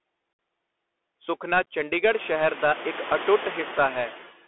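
From the start, Bluetooth CVSD headset codec damage is plainly audible. Nothing passes outside roughly 300 Hz to 3.5 kHz, s sounds turn scratchy, and a granular hiss lies under the speech. An ordinary narrowband line would sound only dull, without that grain.

Throughout, noise suppressor artifacts make the background pump. About 18 dB of noise drops away between phrases and swells back beneath them. This is clearest after about 2 s, where the room noise rises by about 20 dB but stays about 17 dB below the speech.

At 0.33 s, unconcealed Bluetooth headset packet loss leaves a single 60 ms hole, and the sound returns briefly quieter. From 1.63 to 1.67 s, just before "ਸ਼ਹਿਰ ਦਾ ਇੱਕ ਅਟੁੱਟ", 26 ms of losses scatter across 45 ms in runs of up to 11 ms. They sound like crackle, not the suppressor's smooth dips.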